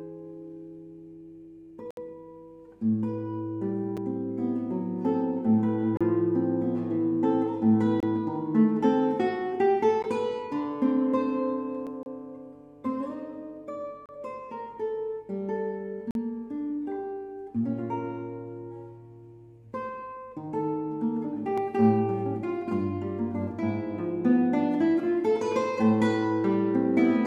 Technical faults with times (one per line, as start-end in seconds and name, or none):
1.91-1.97 gap between stream segments
3.97 gap between stream segments
5.97-6.01 gap between stream segments
8.00-8.03 gap between stream segments
10.03 gap between stream segments
11.87 dropped buffer (overrun)
12.03-12.06 gap between stream segments
14.06-14.09 gap between stream segments
16.11-16.15 gap between stream segments
21.58 dropped buffer (overrun)